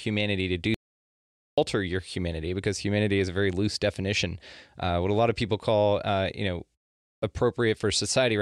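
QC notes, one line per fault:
0.74–1.58 s: audio dropout to silence. The speech cuts to silence with no room tone for about 0.83 s, likely from lost input while recording continued.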